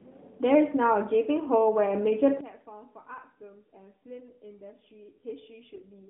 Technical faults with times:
2.41-6.10 one channel inverted
5.74-5.82 AMR bit errors

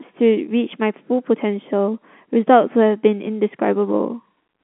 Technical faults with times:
none

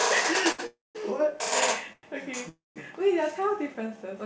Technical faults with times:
0.52-0.60 short stall from a late packet
0.66-0.97 call audio freeze
1.93-2.05 call audio freeze
2.49-2.78 call audio freeze
3.40-3.98 jitter buffer slow-down

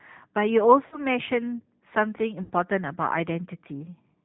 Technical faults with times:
0.00-4.25 G.729 codec
0.87-1.01 VoIP packet loss concealed by the speech codec
2.43-2.52 VoIP packet loss concealed by the speech codec

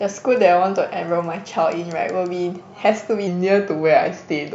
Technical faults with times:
3.27-4.54 wrong sample rate

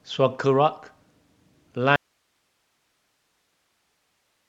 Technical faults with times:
1.96-4.48 audio dropout to a faint residue

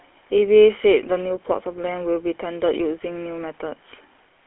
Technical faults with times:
0.00-4.47 GSM full-rate codec

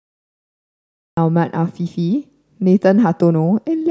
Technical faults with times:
0.00-1.17 cut-off start

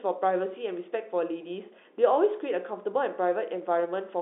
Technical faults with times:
none

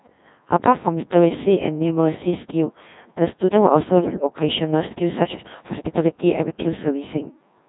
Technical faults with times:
0.00-7.69 Codec 2 vocoder

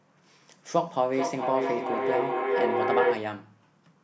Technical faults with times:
1.13-3.44 feedback echo between two devices

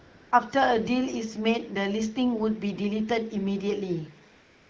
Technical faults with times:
0.00-0.31 AMR comfort noise
4.31-4.69 AMR comfort noise

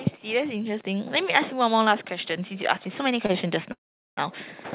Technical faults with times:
0.24-3.56 automatic gain rising
3.26-3.31 short stall from a late packet
3.72-4.19 call audio freeze

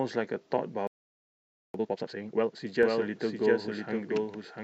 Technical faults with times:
0.87-1.74 playback stall
1.74-2.60 time-compressed catch-up
2.83-4.63 doubled audio track

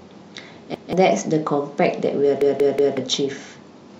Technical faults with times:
0.74-0.93 repeated buffer
2.41-2.97 repeated buffer

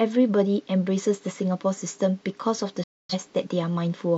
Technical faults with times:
2.83-3.15 digital broadcast dropout

